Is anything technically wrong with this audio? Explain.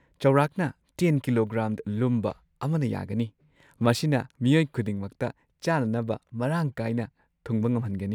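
No, nothing technically wrong can be heard in this speech recording. No fault shows up anywhere in the audio.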